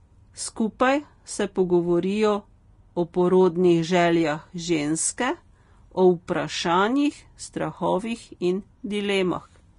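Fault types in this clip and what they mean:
Vorbis compression: The speech has plainly audible coding damage throughout, with a hissy, grainy upper range, roughened vowel tones and softened consonant onsets. The treble stops sharply, with nothing above about 10.6 kHz. That fits low-bitrate lossy coding, likely Vorbis at around 32 kbps, where fine high-frequency detail is replaced by noise of similar energy. Plain low-pass filtering would only dull the sound. Here the band that remains also turns noisy and granular.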